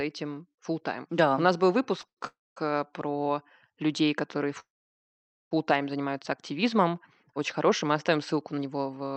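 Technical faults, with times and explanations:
2.01 s and 2.07–2.19 s, short stall from a late packet: twice a packet arrived late and the jitter buffer ran dry. The receiver held the last sound for about 17 ms, then 98 ms, giving a brief drawn-out buzz before the audio resumed where it had stopped, with nothing lost.
2.27–2.58 s and 4.60–5.53 s, call audio freeze: the sound hangs as a fading buzz and then drops to silence, about 220 ms of it in the first stop and 860 ms in the second, for total pauses of roughly 0.3 s and 0.9 s. The likely cause is packets held up in transit, emptying the jitter buffer. When they arrived, playback carried on from the same point, so the audio was delayed by an inserted gap rather than cut.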